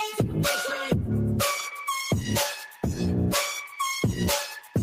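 A noise suppressor applied to music or sounds runs through the whole clip. It is a processor designed for speech, and it treats sustained, steady content as noise and keeps pulling it down, so the level breathes by roughly 5 dB while onsets pass more freely. Unlike compressor pumping, which follows loudness, this tracks how steady the sound is, so held material and tails thin out even when they are quiet.

Sound is cut by the noise suppressor from 2.56 to 2.83 s, dipping by about 11 dB, and again from 4.49 to 4.75 s, by about 12 dB. In each case the suppressor took the sound for noise and ducked it harder than its surroundings. These are not dropouts: the sound never goes silent.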